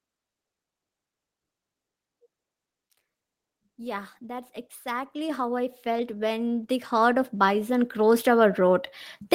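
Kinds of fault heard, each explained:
Automatic gain rising: the gain control judged the incoming level too low and kept turning its gain up. From 3.6 s to 8.86 s the whole recording climbs by about 19 dB. The rise is slow and steady over more than five seconds rather than a sudden jump. The voice and the background noise get louder together, so the background swells along with the speech.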